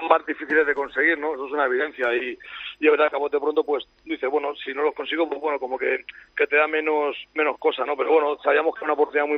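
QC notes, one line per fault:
No faults heard anywhere in the clip.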